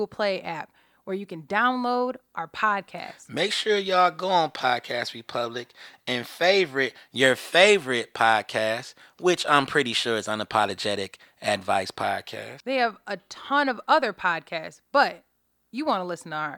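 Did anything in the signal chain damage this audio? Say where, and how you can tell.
No, nothing in the chain from capture to playback has left audible damage on this speech recording, and the signal holds steady throughout with no points of disruption.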